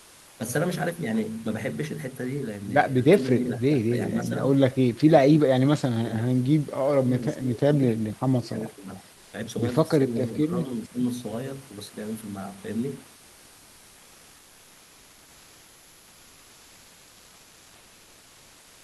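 From 0 to 0.39 s the room background, about 28 dB below the speech, is replaced by comfort noise: a steady, featureless hiss about 1 dB quieter than the real background. This is likely Opus discontinuous transmission, with the sender pausing during silence and the receiver synthesising noise. Unlike a noise gate, the pause never falls to true silence. Unlike ordinary room noise, it has no texture or movement.

Between 3.18 and 10.99 s the speech is suppressed in double talk four times. It sinks at 3.18 to 4.43 s and 10.07 to 10.99 s by around 15 dB, and at 5.03 to 7.78 s and 8.22 to 9.08 s by around 30 dB. The likely cause is an echo canceller unable to separate the talker from the loudspeaker echo of overlapping far-end speech. Packet-loss gaps are abrupt and brief. These are ducking dips that follow the overlap and run for most of a second or longer.

From 13.15 s to the end, comfort noise returns, about 2 dB below the real background, flat and lifeless in the same way.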